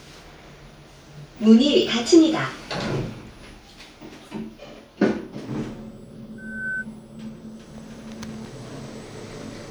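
A recording of everyday sounds with loudspeaker feedback squeal from 6.38 to 6.85 s. A steady 1.5 kHz tone swells over roughly a third of a second to about 5 dB below the sound. Its single fixed pitch and self-building rise set it apart from a hum or a whistle already present in the source.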